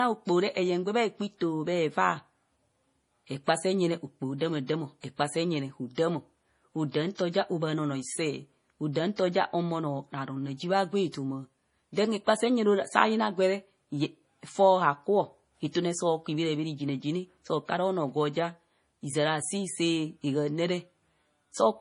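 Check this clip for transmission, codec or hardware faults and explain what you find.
One codec fault runs through the whole speech clip. Low-bitrate audio saved at a high bitrate: nothing sounds above 10.6 kHz, likely because an early low-rate MP3 pass stripped detail that later high-rate re-encoding cannot restore. Unlike a plain high-bitrate file, it has the dull top and smeared artefacts of a starved encoder.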